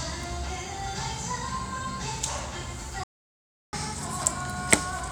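A recording of everyday sounds that cuts out abruptly at 3.04 s and stays silent until 3.73 s, a gap of about 0.7 s, before resuming. This is a playback stall: the output went dead mid-flow and then continued, most likely because the player ran dry of buffered data or its audio thread was held up and could not feed the output for that stretch. From 3.73 s to the end, everything runs fast and sits higher in pitch, by roughly a semitone and a half. This is catch-up at higher speed: having fallen behind during the stall, the player resamples its backlog so it plays at 1.1 times normal speed. Because this speeds the audio up rather than time-stretching it, pitch rises along with tempo, giving the tail of the clip a slightly hurried, brightened character as it works to recover the lost time.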